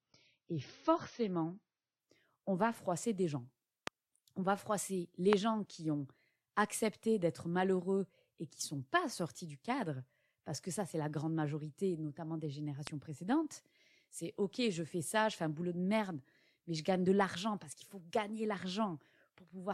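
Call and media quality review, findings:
Dull, swirly speech with nothing above 6.3 kHz from 0.0 to 2.0 s, then a sudden jump in clarity with no gap. Adaptive stream starting at a low bitrate, consistent with roughly 24 kbit/s AAC stepping up to roughly 96 kbit/s.

Sharp loud pop at 3.87 s (about 20 dB over the speech), 5.33 s (about 25 dB) and 12.87 s (about 20 dB), speech continuing underneath. Likely a voltage spike from a switch, static or driver glitch.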